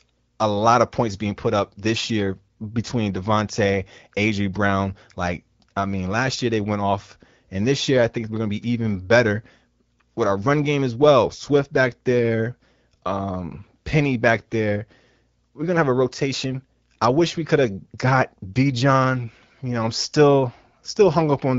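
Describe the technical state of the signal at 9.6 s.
At 9.6 s the signal is intact, with the speech passing cleanly through the AMR wideband (HD Voice) codec at 12.65 kbit/s and no fault present at that moment.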